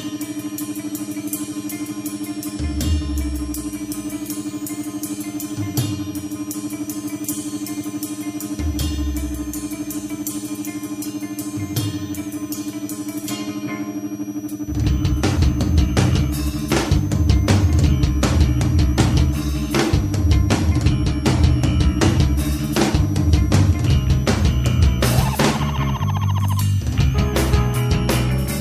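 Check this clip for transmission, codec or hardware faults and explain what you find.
A hardware fault runs through the whole clip: a switching supply whistle. A switching power supply near the audio path is cycling in an audible burst mode, or beating against another converter, and its ripple leaks into the signal. The result is a thin, high whistle, sitting roughly 25 dB below the main sound. Its pitch lies between about 5.4 and 6.9 kHz.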